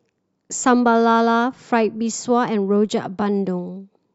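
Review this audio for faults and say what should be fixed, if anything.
No faults turn up in this audio, so nothing needs to be fixed.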